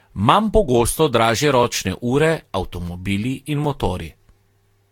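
Generation loss, likely from around seven successive Vorbis encodes near 70 to 80 kbit/s, leaves the speech swirly, hollow and smeared throughout, with softened attacks and nothing above 19.3 kHz. At 3.65 s, just after "avtomobili in", overlapping chunks replay a 12 ms piece at the join, consistent with 2 s chunks, producing a brief click-like stutter.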